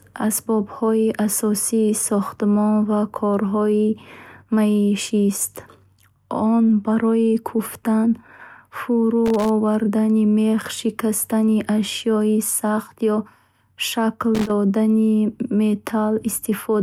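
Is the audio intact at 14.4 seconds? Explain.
No. From 14.35 to 14.51 s a loose connector crackle breaks into the speech. A worn contact making and breaking chops the signal into an irregular, scratchy burst. The waveform shows ragged dropouts and jagged edges, and the spectrogram shows scattered broadband vertical streaks.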